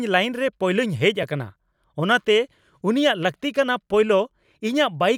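At 1.23 s there is a block of digital silence. A stretch of about 2.7 ms drops to silence, which fits a 128-sample buffer left unfilled. The speech cuts out and returns with no fade. It is heard as a tick or dip.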